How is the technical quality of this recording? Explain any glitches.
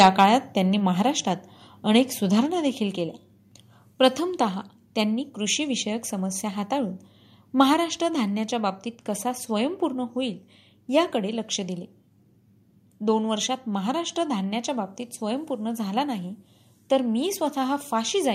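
The recording has two glitches at the start: harsh distortion in the opening syllables, then two sudden drops in level.

From 0.00 to 0.24 s the loudest peaks have their tops flattened, giving a crackling edge. This is likely microphone overload: input about 6 dB too hot for the converter. Only a small share of samples clip, so it crackles rather than buzzing steadily, unlike codec distortion.

At 1.02 s and 2.46 s the voice and background both fall about 3 dB at once. This points to the microphone volume being stepped down by call software reacting to the overload. Because the whole signal drops together, it differs from someone moving away from the microphone.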